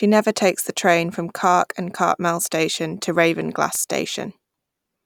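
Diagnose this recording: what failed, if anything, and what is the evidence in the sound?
CD scratch ticks, playback stage. Three brief ticks, 3.75 to 4.21 s. A scratch beat error correction each disc turn. The player concealed the damaged samples.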